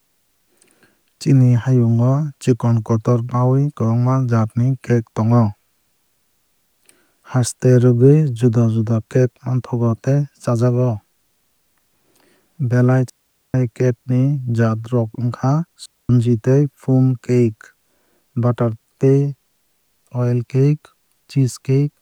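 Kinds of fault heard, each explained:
Digital wireless dropout: the receiver lost too much of the incoming data stream and muted its output with a very quick fade, leaving a clean hole of near silence in the speech, from 13.10 to 13.54 s (about 0.45 s) and from 15.86 to 16.10 s (about 0.24 s). Unlike an analogue radio-mic dropout, there is no hiss, crackle or noise burst at either edge of the gap. The sound simply stops and resumes.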